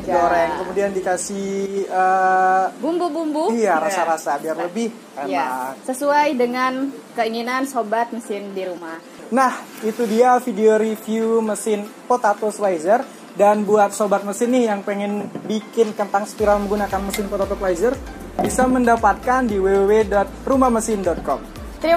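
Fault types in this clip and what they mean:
Adaptive stream at a lower bitrate: from 15.94 s to 17.94 s the sound abruptly changes in quality, with compression artefacts rising, then snaps back with no gap or dropout either side. The two-second dip sounds like the player briefly switching to a much leaner stream when the connection slowed, which fits a drop from roughly 96 kbit/s AAC to a 32 kbit/s HE-AAC version.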